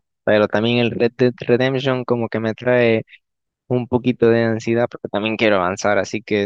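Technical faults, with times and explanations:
No technical faults can be heard in this speech clip.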